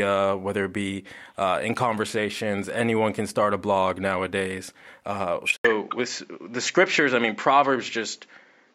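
Input switched to a poorer device at 5.57 s, lasting to the end: after an 80 ms gap the speech loses everything above 7.6 kHz and turns duller, shifts level by a few decibels and gains faint new background noise, likely because recording jumped to another microphone.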